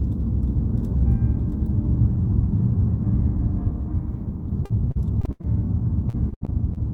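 From 4.65 to 5.45 s and again from 6.09 to 6.78 s, repeated packet loss gives a choppy, robotic texture. Several short holes, up to about 80 ms, are patched by continuing the preceding sound. Unlike a single dropout, the patches recur throughout each stretch.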